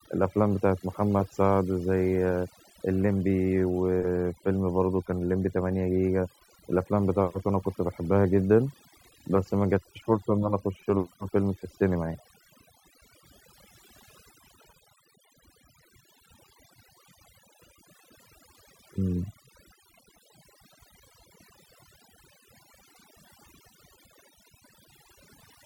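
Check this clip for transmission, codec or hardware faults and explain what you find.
The speech carries one fault for its whole length: overdone noise removal. A noise reducer set too aggressively is pulling individual frequency bands down or out whenever they sit close to its noise estimate, and the softer parts of the voice fall below that line too. Pauses drop away, breaking up into twinkling, chirpy specks. On a spectrogram, the background appears as scattered isolated dots on a dark floor, and the speech harmonics show ragged, missing patches.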